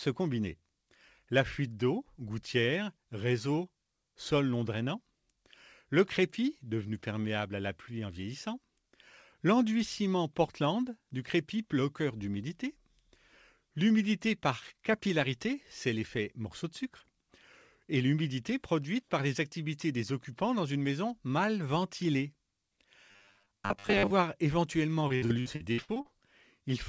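From 23.11 to 24.12 s the speech turns into a rigid, metallic buzz locked at 100 Hz. This is robotic sound from repeated short buffers, likely caused by audio arriving too seldom, so a roughly 10 ms piece is looped in place of about half the real signal. A spectrogram shows stiff, evenly spaced horizontal lines at multiples of 100 Hz. The waveform shows identical short cycles repeating.

From 25.08 to 26.07 s comes repeated packet loss (robotic sound). Audio goes missing again and again in short holes, the longest about 64 ms, and each is patched by stretching the previous sound. About 39% of the stretch is concealed, so it sounds choppy and robotic, with pieces gone. On a spectrogram, already empty above 8 kHz from the G.722 call path, the speech breaks into smeared, frozen blocks with abrupt edges.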